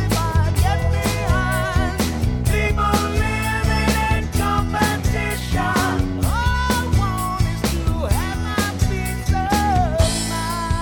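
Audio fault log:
Nothing stood out on listening; the audio gave no sign of any technical problem.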